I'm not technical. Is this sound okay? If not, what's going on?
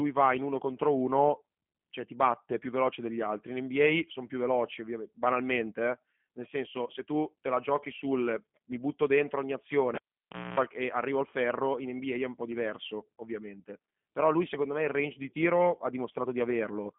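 No. All the way through, the speech sounds thin, boxy and a little rough or robotic, like a cheap phone call. Nothing above about 3.5 kHz comes through, so crisp sounds like s and t lose their edge. That comes from the G.729 codec, a phone-call format that squeezes speech hard and rebuilds it from a simplified model of the voice rather than keeping the actual sound.

At 9.95 s, right after "mi butto dentro ogni", there's a pop and the sound drops almost to silence for about 0.6 s. During that gap a low electrical buzz breaks in for about a quarter of a second, then another pop at 10.59 s as the sound returns before "e arrivo al ferro". That's a cable pulled and plugged in: the buzz is 60 Hz mains hum picked up while the plug was only partly touching.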